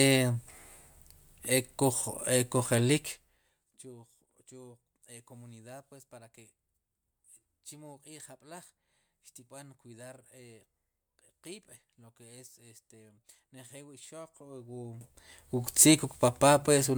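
A fast ticking, like a zip being drawn, rides on the speech from 14.21 to 15.70 s while its level changes by around 25 dB. This is zipper noise: the gain moves in unsmoothed 1 dB steps, about twenty per second, and each jump leaves a small click in the waveform.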